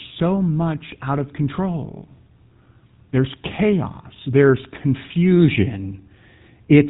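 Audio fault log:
throughout GSM full-rate codec: the speech was coded by modelling the vocal tract and driving it with a sparse, regularly spaced pulse excitation, in a way that fits a 13 kbps GSM full-rate stream. This leaves a plainly audible buzzy, gravelly roughness, and nothing above 3.8 kHz, so the top sounds dull.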